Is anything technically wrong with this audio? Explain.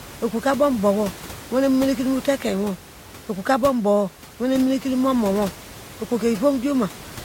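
No, nothing is technically wrong.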